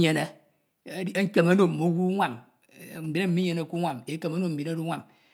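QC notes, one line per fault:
2.96–3.92 s GSM signalling bursts: a nearby 2G phone emitted short groups of radio bursts while signalling to its network, and the audio circuit rectified them, giving a galloping dit-dit-dit of short 217 Hz buzzes roughly 25 dB below the speech.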